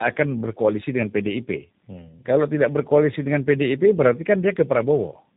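Throughout, tandem speech coding caps the speech at 3.7 kHz and stacks roughness and warble beyond any single codec's, pointing to three speech coders each recoding the last one's damage.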